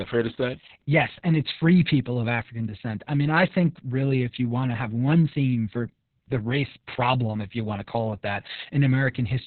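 Opus voice compression affects the whole speech clip, with heavy damage from start to finish. Nothing survives above about 4.3 kHz, so the codec has fallen back to narrowband and works only with its SILK linear-prediction coder. The excitation is coded very coarsely, which fits a bitrate around 6 kbps with long 60 ms frames. The result is muffled and hoarse, with a slightly robotic, buzzy edge throughout.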